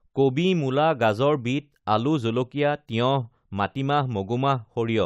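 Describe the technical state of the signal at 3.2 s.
At 3.2 s the speech signal is intact, with no technical fault present at that moment.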